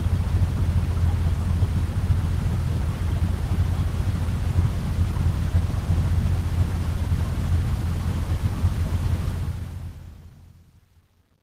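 Nothing technically wrong turns up in this sound recording; it just eases out with a smooth fade over its last couple of seconds, the way an editor would finish it off.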